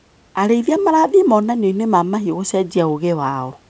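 No technical faults are audible in this speech.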